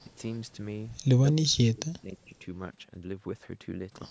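Speech, whose level collapses between 1.24 and 2.44 s, dropping by about 40 dB in broken pieces that total roughly a second. This is likely speech suppressed in double talk, where an echo canceller turns the near talker down during overlap. The waveform shows ragged gaps, and the spectrogram shows fragmented, faded bands.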